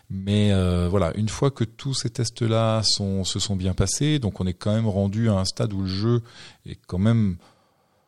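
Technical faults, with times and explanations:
No technical faults can be heard in this recording.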